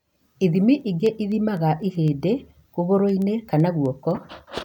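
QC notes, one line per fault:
0.18–4.62 s: word clock ticks. A steady train of around forty short ticks, one roughly every 0.15 s, runs across the speech. The receiving device is clocked independently of the digital link feeding it, so the two sample clocks drift apart. Each time they slip past one another, a single sample is dropped or repeated, leaving a small discontinuity in the waveform. The tick spacing points to a clock mismatch on the order of 200 ppm.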